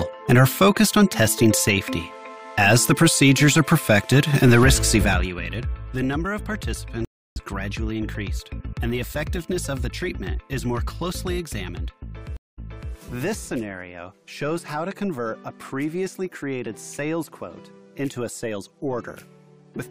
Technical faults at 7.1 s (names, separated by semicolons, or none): stream reconnect